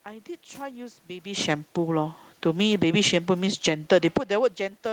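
A short speech recording where the automatic gain control keeps chasing the level. From 2.66 to 4.28 s you get automatic gain falling: the AGC decides things are too loud and eases its gain down by about 8 dB, so the voice and the room noise behind it sink together rather than the voice alone fading. Then, overlapping at 4.22 s and running to 4.66 s, there's automatic gain rising. The input has just dropped by about 19 dB, around where the talker shifts away from the mic near the 4 s mark, so the AGC pushes back up about 5 dB and you hear voice and background swell in tandem.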